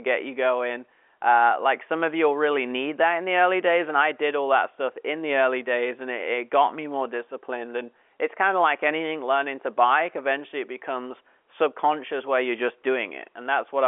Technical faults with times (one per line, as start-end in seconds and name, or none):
none